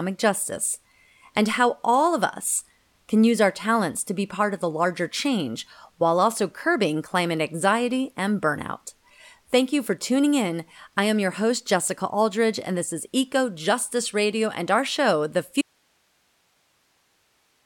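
At 15.61 s the speech drops out abruptly into faint hiss roughly 45 dB down, lasting to the end. This audio dropout to a faint residue likely reflects lost signal on a still-live path. On a waveform it looks like a sudden collapse to a thin noise band.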